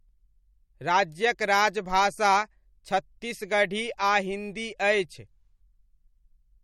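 Throughout the speech there is plainly audible codec damage, most likely MP3 compression at a low bitrate, consistent with roughly 48 kbps. Nothing is present above 18.3 kHz, where the encoder has cut the treble. With too few bits per frame, weak spectral lines drop out and return from one frame to the next, giving the speech a watery, swirling texture, metallic chirps on s sounds, and smeared consonant attacks.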